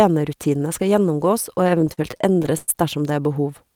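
A speech clip with repeated stalls (stutter) from 1.55 to 2.70 s: the jitter buffer kept running dry, so playback halted 17 times, each gap filled by extending the preceding sound, fading during the longest, 105 ms. On a spectrogram, frozen, stretched harmonic frames interrupt the speech, with nothing actually lost.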